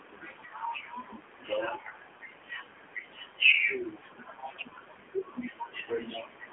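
From start to finish the speech has gone through the AMR narrowband mobile codec, at about 7.4 kbps. The line band sits roughly between 200 Hz and 3.4 kHz, so it's thin and boxy. At that low bitrate the voice comes out buzzy and synthetic, which is plainly audible.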